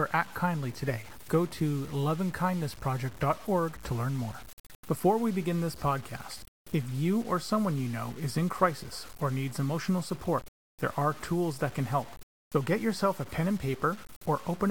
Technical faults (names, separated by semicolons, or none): low bit depth without dither